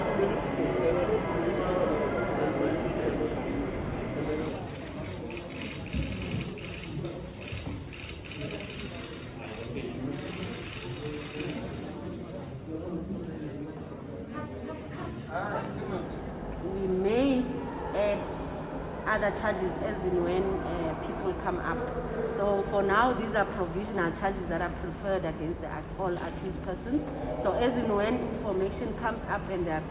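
Nothing goes wrong here at any point; the audio just carries the narrow, phone-like character of a G.711 mu-law call path, with nothing above 4 kHz.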